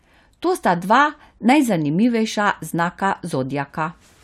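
No technical faults can be heard anywhere in the speech.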